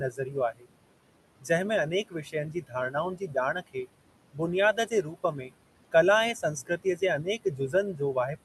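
Speech recorded with room noise sitting about 14 dB below the voice and passed through an Opus call path, whose spectrum stops at 12 kHz. Noise suppressor artifacts run through the whole clip: the suppressor pulls the background down by about 21 dB whenever it judges a band to be steady noise, so the residue sinks between words and rises under the voice. On a spectrogram this shows as a speckled, flickering noise floor that darkens between syllables and fills back in beneath them. Speech cut by the noise suppressor happens at 0.1–0.66 s, 2.08–3.87 s, 4.32–4.41 s, 4.73–5.52 s and from 6.34 s to the end, with drops of about 17 to 21 dB. Within those spans, roughly 300, 700, 100 and 500 ms of the first four, plus part of the last, were treated as noise: quiet consonants and word endings sound swallowed. The waveform shows abruptly shrunken tails, and the spectrogram shows missing high-frequency consonant energy.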